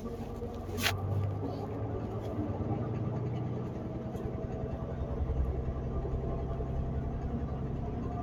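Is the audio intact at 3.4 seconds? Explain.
No. At 3.4 seconds, as across the whole clip, a noise suppressor applied to music or sounds is at work. Built for speech, it treats sustained tones, ambience and decaying tails as noise and pulls them down, while sharp onsets pass. The level swings by about 5 dB, so the sound pumps and thins between attacks. On a waveform, envelopes sag soon after each transient; a spectrogram shows steady bands and tails fading in blotchy, breathing patches.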